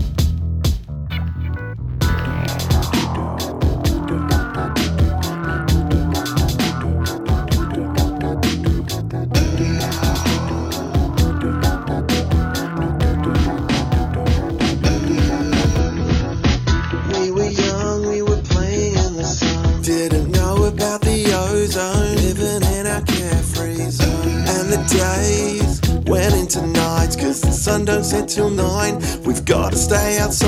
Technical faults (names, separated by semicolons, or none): adaptive stream at a lower bitrate